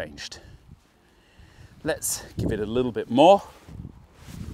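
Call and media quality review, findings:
No faults found on review. Nothing to escalate for this clip.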